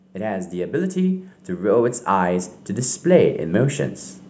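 From 0.05 s to 3.84 s the automatic gain rises: the control judged the input too quiet and kept lifting its gain, by about 13 dB, so speech and background swell together. The waveform envelope widens steadily, and the spectrogram brightens across all bands, up to the 8 kHz ceiling.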